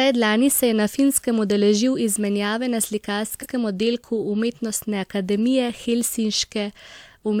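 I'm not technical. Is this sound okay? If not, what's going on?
No. At about 3.42 s, just after "izmenjave na", the speech stutters: a roughly 93 ms piece plays twice before "oddelku umetnostne". This is repeated frames, where a stored or transmitted chunk, which fits two compressed frames, was delivered again, lengthening the speech by 93 ms.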